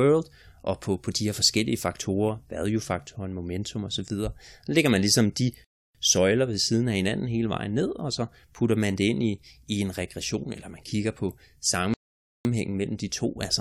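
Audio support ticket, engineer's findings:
Speech drops to silence at 5.64–5.95 s and 11.94–12.45 s, then resumes at the same point. Rebuffering stall: player buffer ran dry, adding 0.30 s and 0.51 s with nothing skipped.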